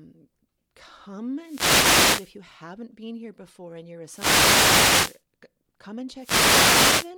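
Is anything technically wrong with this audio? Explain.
Yes. The speech is hit three times by wireless microphone noise hits, at 1.40 to 2.37 s, 4.05 to 5.23 s and 6.17 to 7.13 s, each lasting roughly a second. The analogue FM radio link from the microphone fades when reflected signals cancel at the receiver, so receiver hiss swells up and, at the deepest points, breaks into clicks that cover the voice. Each event sounds like a brief swish or burst of static.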